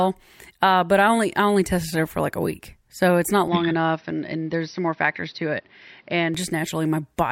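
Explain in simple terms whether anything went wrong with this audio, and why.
From 3.48 to 6.35 seconds, the speech suddenly sounds duller and boxier, with nothing above about 5.9 kHz and faint new background noise. The loudness stays about the same, with no gap. This is likely an input switched to a poorer device.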